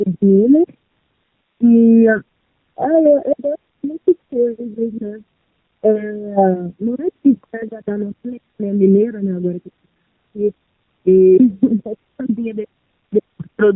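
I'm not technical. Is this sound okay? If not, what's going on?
No. The whole clip has gain pumping: the level is pulled down on every loud sound, so loud and soft parts end up closer together and the sound is squashed. Unlike a steady volume, it moves in step with the speaking. The likely cause is the level set too high, with automatic volume control constantly pulling it back down.

The clip also carries the sound of the AMR narrowband mobile codec, the compression used on older mobile calls. The voice is thin, buzzy and somewhat artificial throughout. Unlike a simply muffled recording, it has a synthetic, processed edge, typical of a low-quality phone call.

From about 0.84 to 1.02 s there are AMR bit errors: a weak phone connection corrupted part of the data. For that moment the voice turns hoarse, scratchy and gargly while keeping roughly its pitch and loudness. Unlike a dropout, the sound keeps going but becomes garbled.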